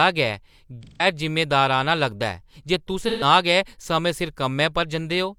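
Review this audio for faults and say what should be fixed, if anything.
AAC frame loss with concealment occurs at 0.83 to 1.06 s and 3.02 to 3.24 s. The decoder rebuilt roughly 171 ms and 128 ms from the last good spectrum, leaving smeared, noisy patches. This points to four and three lost frames. Protect the stream with error correction or retransmission.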